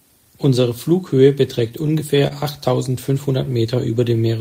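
From 1.69 to 2.33 s the speech shows repeated stalls (stutter). Packets arrived late, so the jitter buffer ran dry four times. On each occasion the receiver stretched the last sound until data resumed, filling about 64 ms in total, with the longest hold near 28 ms. No audio is lost, but the passage hitches and drags for roughly a tenth of its length.

From 3.44 to 4.14 s a jitter buffer slow-down is audible. The buffer was rebuilding its reserve, so the receiver repeated short pitch periods and pause fragments, adding about 65 ms. Playback drops to 92% speed with the pitch unchanged. Sounds are drawn out slightly, and the repeated cycles can leave a faint warble.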